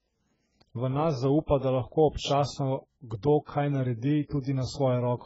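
Throughout, the speech sounds dull, smeared and warbling, with nothing above 7.7 kHz. The likely cause is heavy AAC compression at a very low bitrate, around 12 kbps.

From 3.45 to 3.49 s, a brief hiss runs about 33 ms ahead of a sharp attack and blurs it. This is pre-echo: block-wide quantisation noise spilling into the quiet before the transient.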